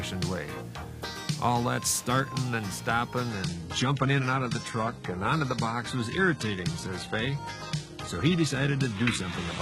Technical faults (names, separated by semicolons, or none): adaptive stream at a lower bitrate